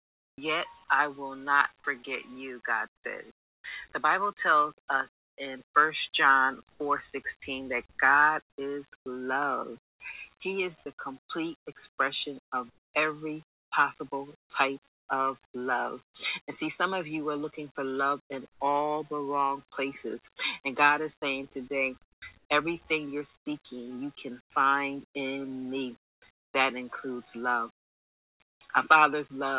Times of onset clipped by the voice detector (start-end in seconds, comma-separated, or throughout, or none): 22.14-22.22